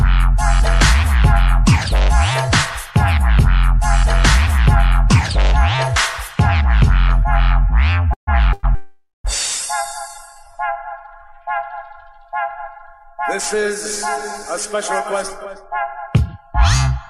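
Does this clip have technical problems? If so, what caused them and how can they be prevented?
Yes. Call audio freezes at 8.13–8.29, 8.53–8.65 and 8.75–9.26 s: the sound buzzes, fades out, then resumes where it stopped, likely from held-up packets draining the jitter buffer. A steadier network path prevents them.

Jitter buffer slow-down at 9.87–10.89 s: repeated pitch periods stretch the audio to 95% speed, adding about 59 ms. Less jitter keeps the buffer full.

Jitter buffer speed-up at 15.46–17.07 s: the audio runs at 104% speed, trimming roughly 70 ms after a delay buildup. Smoother packet delivery avoids it.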